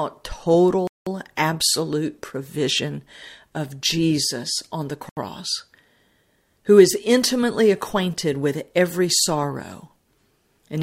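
At 0.87 s the speech drops to silence for about 0.19 s, resuming at 1.07 s; a second, shorter gap runs from 5.09 to 5.17 s, about 78 ms. Both are hard cuts to silence with no fade, which points to a Bluetooth stall. The likely cause is radio interference delaying packets until the headphones' playout buffer emptied, so output halted until retransmitted data arrived and the speech continued.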